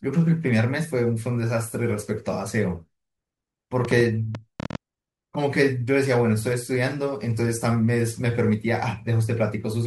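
Speech clip with a train of clicks from 3.85 to 4.76 s, about ten sharp pulses at an uneven 11 per second, peaking about 10 dB above the speech, likely interference or a faulty connection.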